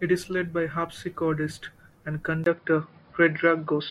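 At 2.44 s, just after "led by harpsichordist and", a 20 ms gap opens and the speech turns dull and boxy until the end, with nothing above 5.2 kHz, a level shift of about 5 dB and new background noise roughly 50 dB down. The likely cause is an input switched to a poorer device.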